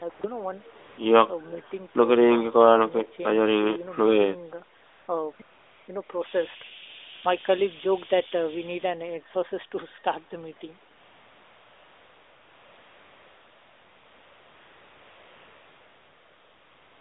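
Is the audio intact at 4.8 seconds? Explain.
No, AMR comfort noise runs from 4.78 to 5.08 s: speech frames stop for 300 ms and smooth synthetic hiss fills the gap, unlike a dropout's dead silence.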